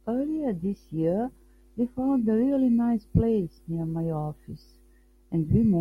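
Listening to the speech recording, nothing stood out as a technical fault at any point.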